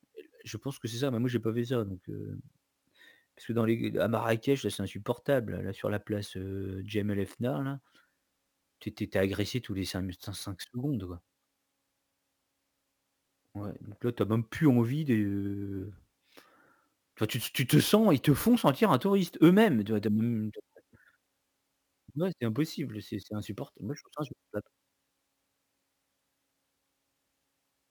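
Throughout the clip, the speech shows crude rate conversion: the sample rate was raised without a proper filter, with each output sample simply copying the nearest input sample. The pattern fits a conversion from 32 kHz to 44.1 kHz, and the repeated samples recur in a cycle set by that ratio. The resulting error, roughly 25 dB below the signal, forms shifted, inharmonic copies of the speech, heard as a gritty buzz or fizz that tracks loud and high-pitched sounds.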